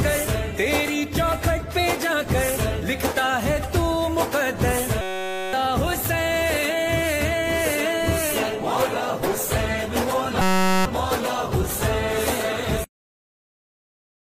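At 5.01–5.53 s and 10.42–10.85 s, a system hang loop repeats one 5.33 ms slice, fitting a 256-sample buffer, as a steady 188 Hz buzz rather than a stutter.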